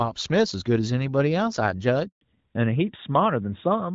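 Speech cuts to silence at 2.07 s, a handover gap of about 140 ms lasting until 2.21 s: the call was passed between networks, no speech frames arrived during the switch, and whatever was said in that span is simply lost. Before the cut, the speech carries the light coding texture of AMR wideband (HD Voice), consistent with a rate around 12.65 kbit/s. From 2.21 s to the end it sounds duller and rougher, with nothing above 4 kHz. That is a fallback to narrowband: the new link restarted the call on the older AMR-NB codec, which fits its 12.2 kbit/s mode.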